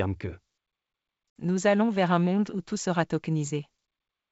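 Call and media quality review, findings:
Packet loss on ADPCM call. Hard-edged silent gap, 1.39 to 1.44 s, about 60 ms, just before "allons vers un monde". Fits roughly three lost packets filled with silence. G.722 decoder's adaptive predictor and step size then mistracked the sender's state.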